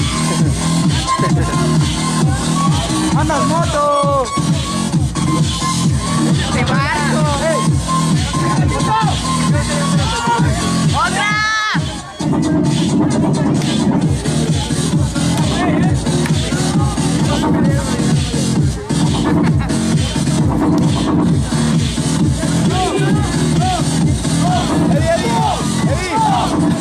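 Audio missing between chunks shows up at 4.65, 14.64 and 24.63 s, three tiny skips spaced exactly 10 s apart. At each point a few milliseconds of sound drop out and the material on either side is butted together with no gap of silence, so the flow jumps forward abruptly. The strict 10 s regularity points to the likely cause: a recorder or processor handling the audio in 10 s chunks and losing a sliver each time one chunk closes and the next opens.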